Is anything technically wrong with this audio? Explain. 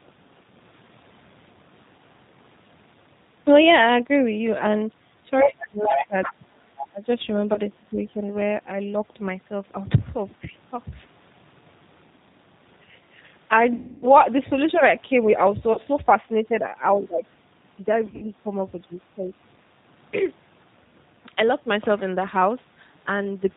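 Yes, there's quite a bit going on here.

The whole clip runs through the G.729 codec at 8 kbit/s. Nothing above 4 kHz survives, so the speech sounds band-limited, a bit rough and synthetic. The codec rebuilds each 10 ms frame from a vocal tract model and a handful of pulses rather than the real waveform.

From 5.41 to 6.84 s there's a second voice sitting only about 5 dB under the main talker. That's most likely the other side's voice leaking through: the far end playing on the talker's loudspeaker and getting back into the mic because the echo canceller didn't fully remove it.

Overlapping that, from 5.41 to 8.23 s, the talker keeps dipping, by as much as about 25 dB, for roughly two seconds in total. From 14.64 to 17.24 s there are shallower dips of about 15 dB, adding up to under a second. This is likely speech suppressed in double talk: with both sides talking, the echo canceller couldn't separate them and turned everything down.

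There's also VoIP packet loss concealed by the speech codec at 7.54 s (20 ms), 13.76 to 14.16 s (260 ms), 15.73 to 15.79 s (40 ms), and 18.06 to 18.25 s (120 ms in patches, longest about 60 ms). That pattern fits 20 ms packets going missing. The decoder stretches its last pitch and filter into a buzzy, fading tone, and the speech stays weak and smeared briefly afterwards. The 260 ms gap is the longest one.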